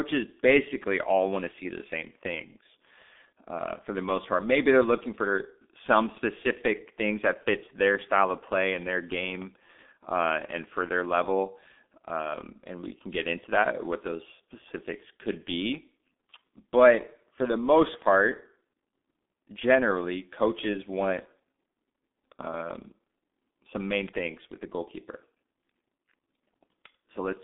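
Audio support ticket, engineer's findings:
G.723.1 codec throughout. Muffled, hoarse speech with smeared consonants. Nothing above 3.8 kHz; line band roughly 200 Hz to 3.6 kHz. Heavy coding damage, which fits a 6.3 kbit/s stream. 30 ms frames and a slow voice model blur transients.

Bit error spike at 12.85 s. One sharp broadband tick, unrelated to the speech. Probable cause: a flipped bit in memory or on a digital link. The sample value jumps by a power of two and snaps back, consistent with a single corrupted sample.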